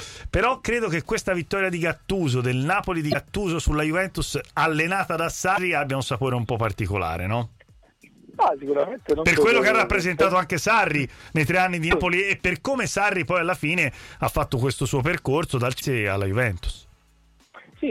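At 3.10 to 3.15 s, 5.53 to 5.58 s, 11.87 to 11.93 s and 15.77 to 15.82 s, brief glitches of about 55 ms each break into the sound. These come from damaged data in a compressed stream: corrupted bytes make the decoder misread frames and hunt for the next valid header.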